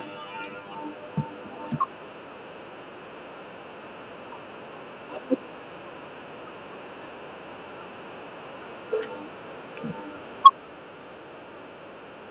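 A speech recording carried over a narrowband call link, audible as a band that stops at 4 kHz, consistent with G.711 mu-law at 64 kbps. From 10.45 to 10.48 s a peak turns harsh and crackly, its top flattened for nearly a third of those 30 milliseconds and pushed about 6 dB past the converter's limit. This is microphone overload, likely from the input volume being set so high that the converter runs out of headroom and squares off the waveform's crests. Right on the heels of that distortion, at 10.47 s, the level of the sound and its background drops abruptly by about 3 dB in a single step rather than a smooth fade. That is the microphone volume stepped down, likely the call software reacting to the clipped peak by cutting the device's input gain in one move, which explains why the drop follows the distortion so closely.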